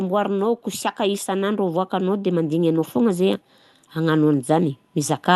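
From 0.63 s to the end at 5.35 s, automatic gain rising slowly lifts the level: the control judged the input too quiet and kept raising its gain. Unlike a source moving closer to the microphone, the background noise swells in step with the speech.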